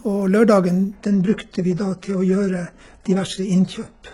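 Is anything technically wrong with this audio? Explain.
Yes. From 0.96 s to the end, an adaptive stream at a lower bitrate takes over, consistent with roughly 12 kbit/s HE-AAC: treble above 11.1 kHz abruptly vanishes and codec artefacts rise, with no gap.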